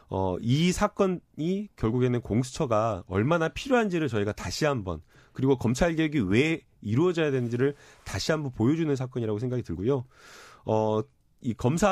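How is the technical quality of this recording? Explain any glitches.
The recording shows no technical glitches: the signal stays continuous and stable throughout, with nothing interrupting or disturbing it.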